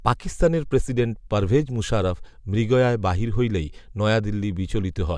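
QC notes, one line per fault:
No fault found in this clip.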